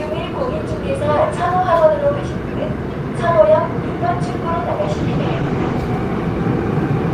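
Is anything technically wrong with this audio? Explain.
Yes. From 4.82 to 5.89 s there is a call bitrate drop. The encoder cut its bit budget, consistent with a fall from around 40 to 14 kbps for about a second, coding more coarsely and discarding highs. The sound turns muffled and watery. A spectrogram shows the upper band abruptly emptied, with blurred texture below.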